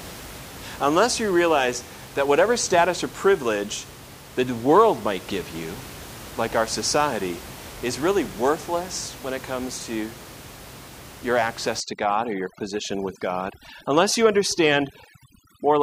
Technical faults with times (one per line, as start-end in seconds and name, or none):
11.80-15.83 overdone noise removal